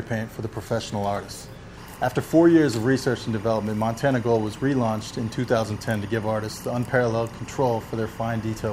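Timecode bleed runs from 1.77 s to the end of the clip. A linear timecode signal at 24 frames per second is leaking into the audio, a square wave flipping between tones near 1 kHz and 2 kHz, heard as a steady chirping warble roughly 25 dB under the sound.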